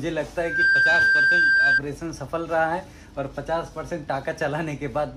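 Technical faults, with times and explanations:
0.36–1.82 s, loudspeaker feedback squeal: a single 1.6 kHz tone swells within a fraction of a second to about 10 dB above the sound. The mic-speaker loop reinforces itself, unlike a steady electrical whine.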